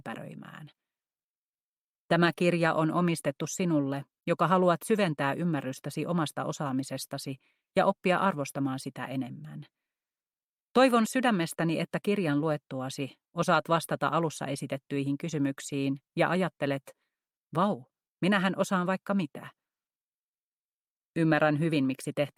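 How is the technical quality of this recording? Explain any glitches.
The technical quality of this recording is sound, with no glitches to explain.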